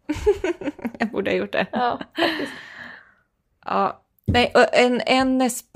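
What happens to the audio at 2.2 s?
Nothing goes wrong at 2.2 s: the speech carries on intact through that moment, with no dropout, click, glitch or other fault.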